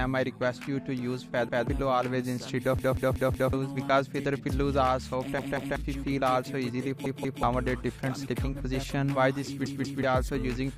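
A repeated buffer stutter is heard at 1.49 s (one extra play), at 2.79 s (four extra plays, lasting to 3.53 s), and at 5.39, 7.06 and 9.66 s (two extra plays each). New audio arrived late, so the same piece of about 186 ms, which fits an 8192-sample buffer, was played again with a hard join at each repeat. Each stutter skips roughly 0.2 to 0.7 s of material. Unlike a dropout, there is no silence, only identical pieces repeating.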